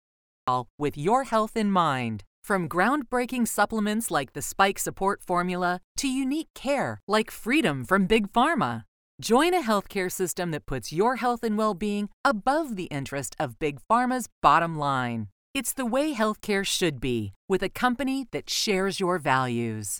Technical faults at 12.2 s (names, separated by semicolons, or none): none